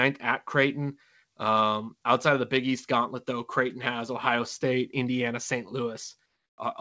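Right near the end, from 6.26 to 6.58 s, the real background drops out for about 320 ms and a flat, featureless hiss sits in its place, roughly 4 dB quieter than what was there before. That's comfort noise in place of the background: the sender's voice detector likely decided nothing was being said and paused transmission, so the far end filled the gap with synthetic noise. The background, already about 53 dB under the loud parts, loses its texture there. You can also hear the call path's G.722 coding, with nothing above 8 kHz.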